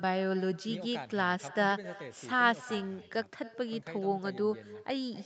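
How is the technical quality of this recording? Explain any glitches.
The recording has one clear fault, heard for the whole clip. Throughout, echo with no canceller: the far end's microphone recaptures the loudspeaker playback and returns it, so every phrase is shadowed by a thin copy about 19 dB quieter, roughly a third of a second later. The sound also stops at 8 kHz, as expected from the call path's bandwidth.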